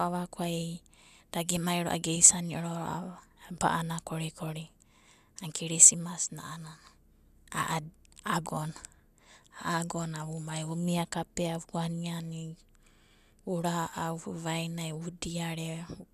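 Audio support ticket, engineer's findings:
No faults found.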